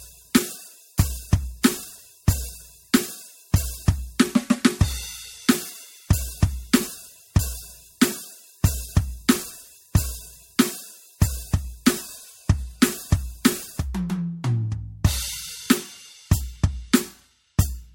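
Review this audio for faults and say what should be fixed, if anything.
Generation loss throughout the music: swirly, hollow smearing, blurred attacks and nothing above 16.7 kHz, likely from about five successive MP3 encodes near 63 kbit/s. Go back to the original lossless source and encode to a lossy format only once, as the final step.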